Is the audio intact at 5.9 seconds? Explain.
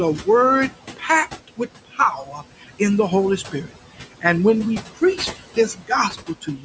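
No. At 5.9 seconds the speech sounds swallowed: parts of it drop away with the background, soft sounds turned down along with it. This is speech cut by the noise suppressor, in the stretch from 4.95 seconds, just after "when we", to the end of the clip at about 6.6 seconds. The suppressor mistook some of the speech for steady noise and lowered it along with that noise, by about 18 dB at the deepest point, adding up to roughly half a second of affected sound within the span.

The same moment also carries noise suppressor artifacts. The room noise, about 14 dB below the speech, sinks in the gaps and comes back up underneath the talking. That happens because the suppressor pulls each band it judges to be noise down by about 15 dB, frame by frame, and lets it return wherever speech fills the band.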